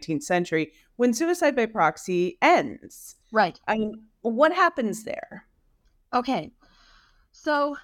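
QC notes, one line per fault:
No fault to log in this clip.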